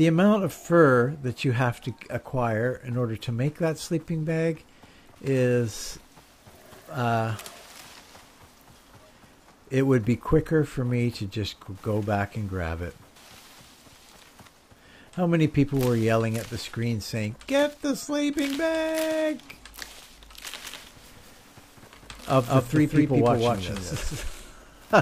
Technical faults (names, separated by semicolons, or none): doubled audio track